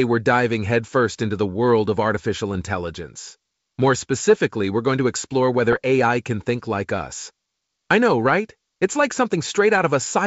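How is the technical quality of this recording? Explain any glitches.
Two short glitches break the speech, over a clear wideband telephone sound whose light upper-band hiss fits G.722 at the full 64 kbit/s.

Bit errors on an ADPCM link occur at 2.55 to 2.62 s, right after "the world of artificial", and at 5.73 to 5.77 s, after "we're going to explore". Flipped bits, around a fifth of a percent, knock the decoder's step size and predictor off track. Each burst is heard as a pop and a rough crackle with a brief change in level.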